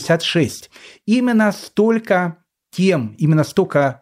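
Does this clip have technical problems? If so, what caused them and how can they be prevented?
No, the recording has no technical problems, so there is nothing here that needs a cause traced or a prevention step.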